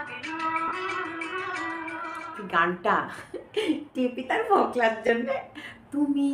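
At 0.68 to 0.71 s and again at 5.07 to 5.09 s, Bluetooth LE Audio frames were lost, and the LC3 decoder concealed each gap by replaying the last good spectrum with randomised phase signs. The first dropout lasts 30 ms, which fits three lost 10 ms frames; the second lasts 20 ms, consistent with two. Each gap is heard as a brief, hissy smear where tonal detail dissolves into noise.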